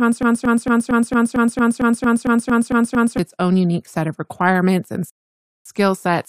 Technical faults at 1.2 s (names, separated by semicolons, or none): broken-record loop